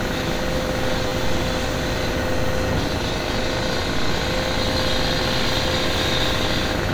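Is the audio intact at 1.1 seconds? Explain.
No. From 1.08 to 1.11 s there is a repeated buffer: fresh audio arrived late, so the output replayed its last block. The tiny slice recurs with hard joins, heard as a brief buzz, which fits a 10 ms buffer played three extra times.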